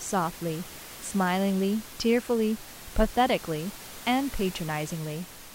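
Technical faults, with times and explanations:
No technical faults can be heard in the recording. The room's own background noise sits about 17 dB below the speech and belongs to the space where the microphone was, not to the system.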